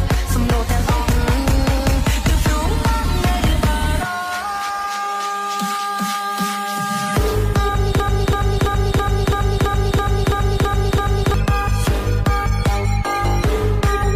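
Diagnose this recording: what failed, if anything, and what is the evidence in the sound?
A broken-record loop runs from 8.00 s to 11.34 s: one fragment of about 0.33 s repeats exactly, back to back, ten times, and whatever should have played in those three seconds never arrives. The identical repeats point to a stall at the buffer or playback stage, with the player or stream most likely stuck re-sending the last block it held until fresh data resumed at 11.34 s.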